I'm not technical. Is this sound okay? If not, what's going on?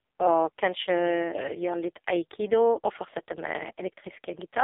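No. The whole recording has passed through the AMR narrowband mobile codec, the speech compression used on older 2G and 3G phone calls. It keeps only a thin middle slice of the sound, roughly 300 Hz to 3.6 kHz, with nothing at all above about 3.7 kHz, so voices sound muffled and boxy. The codec was squeezed hard here, which is why the speech comes out buzzy and synthetic from start to finish.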